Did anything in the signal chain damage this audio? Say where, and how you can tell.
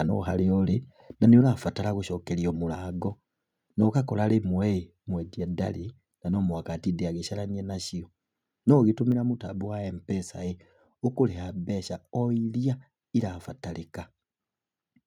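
Yes. At about 1.41 s the speech and the background drop together by about 4 dB in a single step and stay at the lower level. This is likely a microphone volume stepped down at the call-processing stage: automatic gain control in the call software judged the input too hot and cut the device's input volume at once. Because the cut happens before encoding, voice and room sound fall by the same amount.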